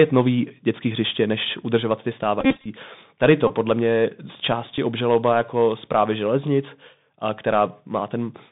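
The whole recording runs through the Bluetooth CVSD headset codec at 64 kbps, and you can plainly hear it. The band sits at about 150 Hz to 3.7 kHz. The codec tracks the waveform one bit at a time with an adapting step, so sharp, loud high content outruns it. That leaves s sounds scratchy and puts a grainy hiss underneath the speech.

Then come the Bluetooth headset packet repeats, where lost packets get replaced by re-decoding the previous one. Right after "hřiště než udržovat ty", from 2.40 to 2.66 s, about 165 ms goes missing, scattered across roughly a quarter second. The longest run is around 50 ms, and it gives a short, steady buzz near 267 Hz. A smaller burst at 3.47 to 3.51 s loses about 22 ms just before "podle mě z". At 4.77 s, between "to podle mě z" and "obžaloba jako zprávy železnic", about 11 ms goes missing.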